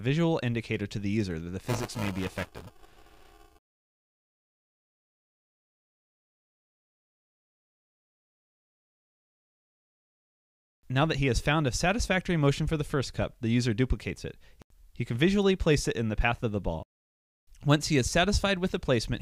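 Buffer tearing runs from 1.66 to 5.65 s. The write and read positions have slipped so that about a fifth of each buffer replays audio from roughly ten milliseconds earlier, hard-joined on both sides. The result is a rattling 375 Hz buzz, which fits a 128-sample buffer.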